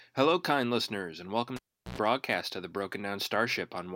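Cable pulled and plugged in from 1.56 to 1.98 s, after "kind listeners and welcome": a pop, 371 ms of near silence, 95 ms of 60 Hz mains buzz as the plug tip makes partial contact, then another pop before "of the".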